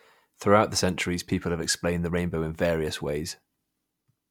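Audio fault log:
Nothing stood out on listening to this speech recording.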